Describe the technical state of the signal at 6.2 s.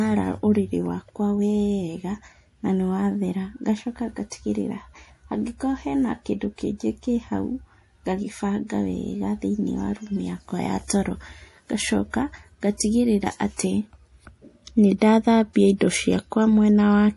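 At 6.2 s the speech shows MP3 compression damage, and it runs through the whole clip. Nothing is heard above 11.5 kHz, so the treble stops at a hard ceiling. The remaining sound has a watery, swirling texture, with metallic edges on s sounds and smeared onsets. The likely cause is an MP3 encode at a low rate, which fits about 48 kbps. Short of bits, the encoder drops the top band and weak frequency detail that flickers between frames.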